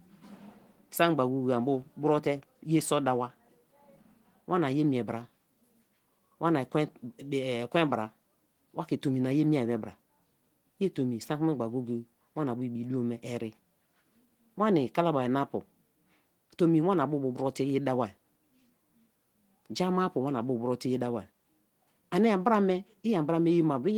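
Speech clip with no technical faults to report.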